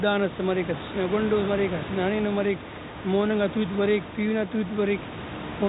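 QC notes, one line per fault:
Nothing stood out on listening to this speech clip.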